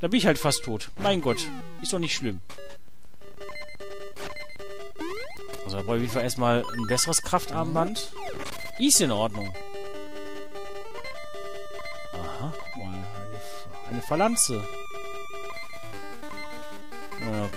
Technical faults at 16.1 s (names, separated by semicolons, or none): none